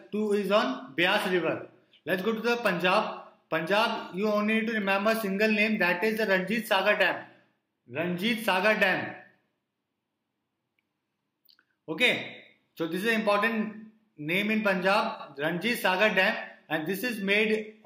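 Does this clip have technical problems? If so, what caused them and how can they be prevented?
Yes. From 15.15 to 15.25 s the clip has frames out of order: two adjacent runs of encoded frames, each about 46.4 ms long (which fits two frames per run), reached the decoder swapped and were decoded in that sequence. That brief stretch plays its second half before its first, so it comes across as a garbled flutter. No time is lost overall. Prevent it by sequence-numbering packets and reordering them in a jitter buffer before decoding.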